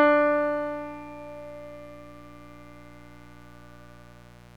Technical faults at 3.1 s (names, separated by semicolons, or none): mains buzz